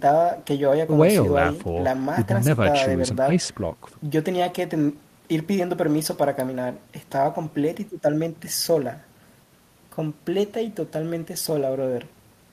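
No technical faults can be heard in the speech recording; the signal holds steady throughout with nothing breaking into it.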